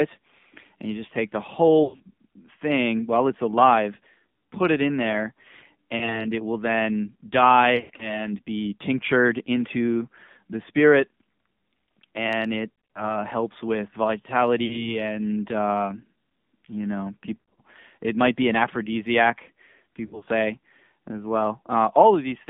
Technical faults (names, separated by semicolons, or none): AMR narrowband mobile codec; lost AMR speech frames